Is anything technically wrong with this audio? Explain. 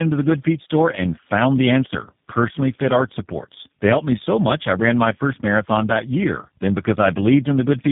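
Yes. Throughout, the speech shows tandem speech coding. It was decoded and re-encoded across three speech codecs in a row, which points to iLBC, then GSM full rate, then G.729A. Each stage compounded the last one's errors, leaving rough, warbly, muffled speech with nothing above 3.8 kHz.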